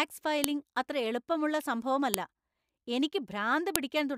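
At 0.44 s, just before "അത്ര എളുപ്പമുള്ള", a sharp, loud click cuts into the speech. Another follows at 2.14 s, right after "അത്ര എളുപ്പമുള്ള", and a third at 3.76 s. Each is a file header played as audio. Separately stored pieces were joined without stripping their headers, so those few dozen bytes play as samples. Unlike a dropout or a buffer glitch, each snap lands at a piece boundary and stands out whatever the speech is doing.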